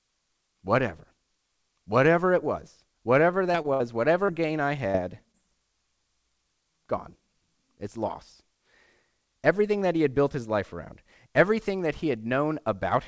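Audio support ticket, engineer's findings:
Short concealed packet loss: brief smears/wobbles at 3.52–3.56 s (right after "it was whatever"), 3.62–3.66, 4.26–4.30 (before "gain I"), 4.92–4.96 (after "gain I") and 5.32–5.36 s. About 20 ms lost each time. Receiver concealment extends the preceding sound, then crossfades back into live audio.

Burst of packet loss: 3.74–3.82 s, about 60 ms missing. Jitter buffer/decoder concealment continues the last sound with decaying level, then playback resumes further on with that stretch gone. This lands just after the 3.5–3.7 s loss cluster. Band-limited to 8 kHz, consistent with a G.722-class WebRTC path.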